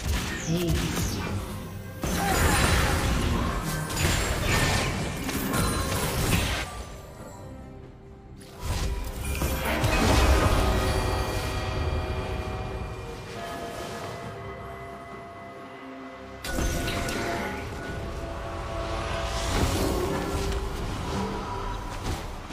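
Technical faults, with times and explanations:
5.96–6.04 s and 10.52–10.60 s, chunks out of order: each time, a 40 ms chunk arrives one chunk late and plays after its successor, briefly jumbling the sound. The waveform shows three abrupt steps per event.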